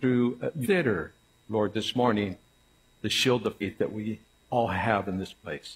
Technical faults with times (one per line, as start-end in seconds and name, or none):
0.47-5.60 word clock ticks
0.61-0.67 damaged data in a compressed stream
3.58-3.64 damaged data in a compressed stream